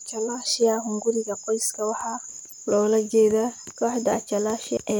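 A speech recording with one fault: damaged data in the compressed stream, heard from 2.44 to 2.53 s, just before "loola jeedaa". For about 84 ms the decoder is fed corrupted frames, misreads them and loses sync while hunting for the next valid frame header, so the sound briefly breaks up. A plain dropout or concealed packet loss, by contrast, would not involve the decoder losing sync.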